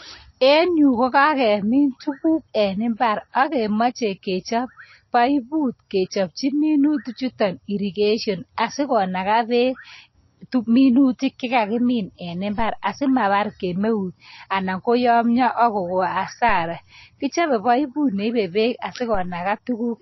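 MP3 compression is likely behind what runs throughout: the speech has nothing above 5.8 kHz and plainly audible codec damage, with weak frequency lines dropping in and out between frames for a watery, swirly texture. That points to a low bitrate near 26 kbps.

A DC step comes at 12.59 s, just after "tuminutik chekagimin", and another at 19.15 s. Each time the waveform's zero line jumps suddenly, giving a low thump or click, and the offset then decays away as a 2 Hz high-pass drains it, while the speech continues unchanged.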